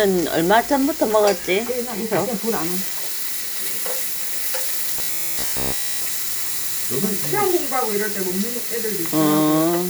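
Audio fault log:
4.99–6.06 s: robotic sound from repeated short buffers. The audio becomes a rigid, metallic buzz at 66.7 Hz, with essentially all of it repeated, likely from one 15 ms buffer replayed while incoming audio arrived too late and the missed stretch was dropped.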